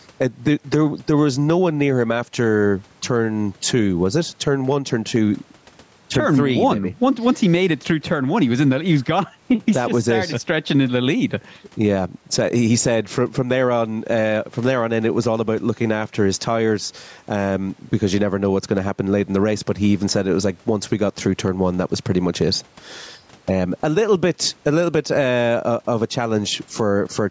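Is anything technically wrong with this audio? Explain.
Yes. Gain pumping runs through the whole clip. The gain swings by around 10 dB. The likely cause is input gain set far too high, with a fast limiter clamping down on every peak.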